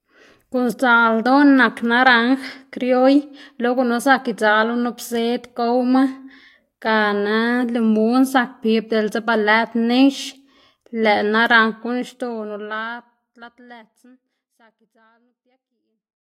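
No faults heard in this speech clip; the level eases out smoothly from around 12 s to the end, with no click or hard edge.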